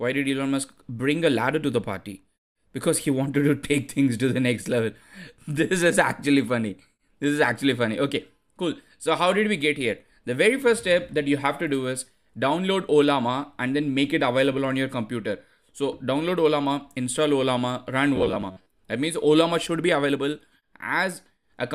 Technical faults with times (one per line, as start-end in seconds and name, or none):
18.16-18.67 robotic sound from repeated short buffers